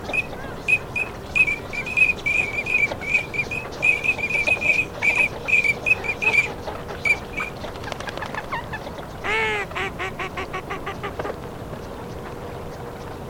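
Chunks out of order occur at 6.49 to 6.51 s and again at 7.81 to 7.83 s. In each case one chunk of about 10.7 ms arrived one chunk late and played after its successor, so two neighbouring slices swap places. Nothing is dropped, but the reordering leaves three hard joins per event, heard as a tiny jumbled moment.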